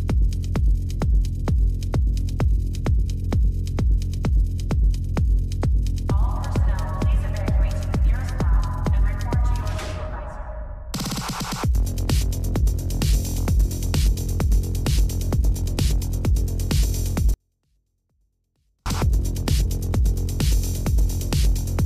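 From 17.34 to 18.86 s, a 24-bit alignment error: low-byte 24-bit samples read as 32-bit values drop the sound about 48 dB, clean but nearly inaudible.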